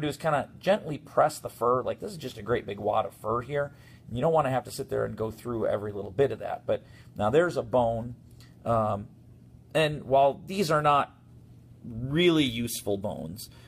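No technical faults can be heard anywhere in the audio, so there is nothing to describe in time order.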